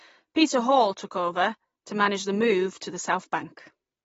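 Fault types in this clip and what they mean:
AAC compression: dull, smeared speech with nothing above about 7.6 kHz and a warbling fizz on sibilants, likely from low-bitrate AAC-LC around 24 kbps.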